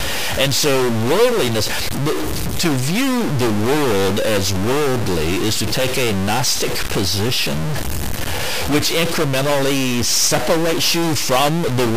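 A stuck bit runs throughout, likely a data line held fixed, shifting samples by about -15 dBFS. The result is harsh buzz over the speech and noise filling the pauses.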